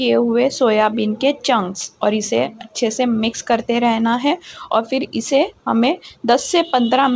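No technical faults are audible; the band stops at 8 kHz, consistent with a wideband call codec such as G.722 on a normal call path.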